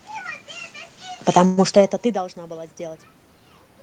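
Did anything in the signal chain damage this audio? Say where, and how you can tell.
Yes. In the call processing, automatic gain rising runs from 1.35 to 3.07 s. Around 1.5 s the talker moves away and the input falls by about 24 dB. The gain control then climbs by about 3 dB, and the room noise swells with the voice. A talker moving changes only the voice level.

In the network, there is a call audio freeze from 1.45 to 1.59 s, likely from delayed packets draining the jitter buffer. The last sound is held as a fading buzz or hiss for about 0.12 s, then the audio resumes with nothing missing, only pushed later. That distinguishes it from a dropout, which would leave a hole.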